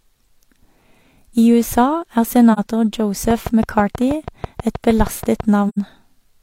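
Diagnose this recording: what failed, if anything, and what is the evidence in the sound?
AAC frame loss with muting, a codec or network stage fault: the speech drops into soft-edged silences at 2.53 to 2.59 s (about 43 ms, which fits one lost frame) and 5.68 to 5.78 s (about 85 ms, fitting two). The decoder zeroed the missing spectra, and window overlap fades the gaps.

A train of clicks runs from 3.31 to 5.41 s: around fifteen near-identical pulses at a regular 6.2 per second, peaking roughly 10 dB above the speech. The likely source is electrical interference coupling into the analogue wiring or a faulty connection or power supply.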